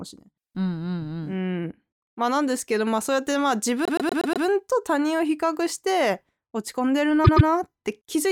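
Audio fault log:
3.85 to 4.45 s, repeated frames: The same 120 ms block plays five extra times, adding 0.6 s. It is heard as a rapid stutter. The block length fits a run of about five compressed frames.
7.24 to 7.48 s, repeated frames: A 120 ms block repeats twice more, adding 0.24 s. It gives a shorter stutter.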